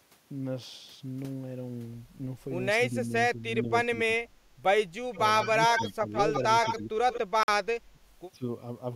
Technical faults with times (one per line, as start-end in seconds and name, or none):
2.78-4.42 speech suppressed in double talk
4.91-5.18 speech suppressed in double talk
5.12-7.19 echo leak
5.76-6.29 speech suppressed in double talk
6.96-8.00 speech suppressed in double talk
7.43-7.48 Bluetooth stall
8.38-8.42 speech suppressed in double talk